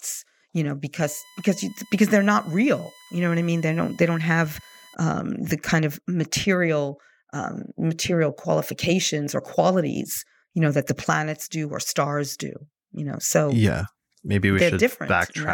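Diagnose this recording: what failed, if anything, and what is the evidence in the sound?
USB whine enters through the analogue wiring, via power or ground. From 0.99 to 4.95 s, a fixed-pitch whine sits under the speech. Its fundamental is 1 kHz, and it is loudest at 2 kHz, roughly 30 dB down. The bus's 1 ms frame current leaks into the audio path.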